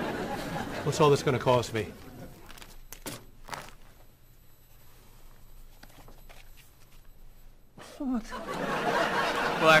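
No technical faults are audible.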